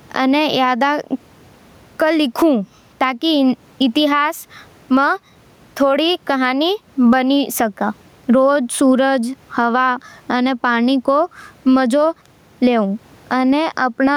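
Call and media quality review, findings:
Gain pumping, throughout: room noise, about 43 dB below the speech, swells in pauses and ducks under each loud syllable, a swing of roughly 15 dB. Likely excessive mic gain with a fast limiter clamping peaks.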